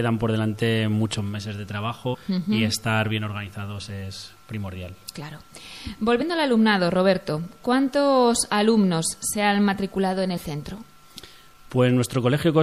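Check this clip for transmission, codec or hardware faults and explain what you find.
Two faults are present. Throughout, the audio sounds watery and swirly, with a dulled top end, consistent with likely MP3 compression at a low bitrate of around 64 kbps. Weak frequency content drops in and out between frames. At 2.13, 6.21 and 10.36 s there are compressed frames skipped: the audio jumps ahead by roughly four, one and two 26.1 ms frames respectively (roughly 100, 30 and 50 ms). Overlapping frames turn each join into a brief smeared blip rather than a hard click.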